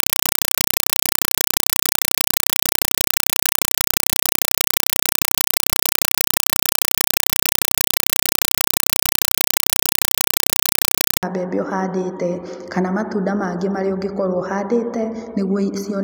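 From 0 to 11.23 s, compressed stream played as audio: undecoded data chatters as loud static in 4 ms bursts 31.25 times a second, unlike steady hiss.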